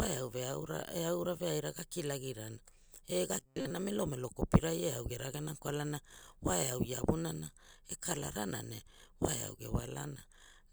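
From 3.38 to 3.71 s, new audio likely arrived too seldom, so most of that stretch was filled by looping a slice of about 7.5 ms. This produces robotic sound from repeated short buffers: a rigid, metallic buzz at 133 Hz that only loosely follows the speech.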